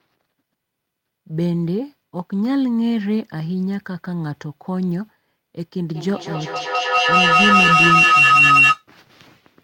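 A microphone-to-loudspeaker loop gains level on each pass, producing feedback howl from 5.94 to 8.87 s. The repeats swell rather than decay, narrowing to a tone around 3 kHz that pulses about every fifth of a second and peaks about 7 dB above the speech.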